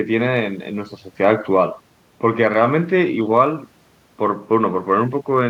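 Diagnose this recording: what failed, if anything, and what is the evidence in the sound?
Clock slip clicks run from 0.11 to 5.48 s, a faint, even rattle of roughly 50 ticks a second under the speech. The likely cause is two unsynced converter clocks about a tenth of a percent apart, each tick a single dropped or repeated sample.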